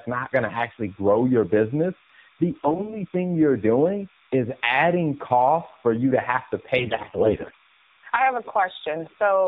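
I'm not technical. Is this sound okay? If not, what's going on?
No. A timing signal called timecode bleed has leaked in from a nearby cable or track. It flips between two high-pitched tones, near 1 and 2 kHz, carrying 30 frames of timing code every second, so a faint, steady chirping warble sits behind the speech for the whole clip.

The speech has also been squeezed through the AMR narrowband mobile codec, the old phone-network format. It cuts off everything above 4 kHz and rebuilds the voice from a simplified model, so throughout it sounds muffled, buzzy and somewhat artificial, like a weak phone call.

Twice, AMR bit errors appear: the phone link scrambled some of the data. From 2.51 to 3.03 s, after "actually grow your business" and before "thing you're doing is", the voice turns hoarse and gargly. It happens again, more heavily, from 6.78 to 7.56 s, between "you to have to" and "I have a".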